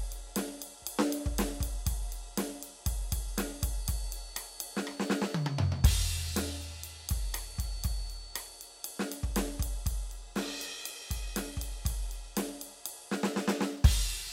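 From 3.71 s to 9.31 s a thin, steady whistle at 4.5 kHz sits well below the music, swelling and fading slowly in level. This is a feedback whistle. Likely, the loudspeaker-to-microphone loop is balanced just short of runaway, sustaining one tone.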